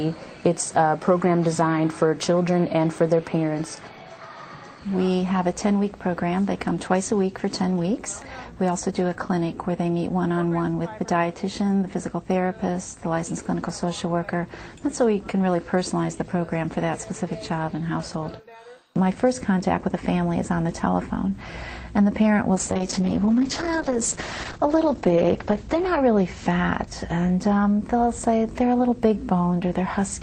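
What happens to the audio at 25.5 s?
At 25.5 s the clip is inside a call bitrate drop that runs from 22.56 to 26.93 s. The encoder was forced down to far fewer bits, which fits a fall from 32 to roughly 9 kbps. At its lowest, for about 3.4 s, it codes coarsely and trims the top end from 20 kHz to 8 kHz, so the sound turns muffled and rough. Unlike packet loss, nothing cuts out. The audio stays continuous, just degraded, until the bitrate recovers.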